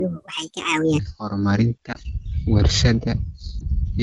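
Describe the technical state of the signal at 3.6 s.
At 3.6 s, between 3.59 and 3.66 s, there is a lost AMR speech frame. One frame failed its error check, and the wideband decoder filled the gap by extending the previous pitch and spectral settings at reduced gain. The result is a short dip or warble before the speech recovers.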